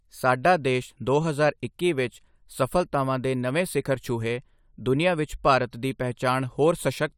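No technical faults can be heard anywhere in this recording, and the signal holds steady throughout.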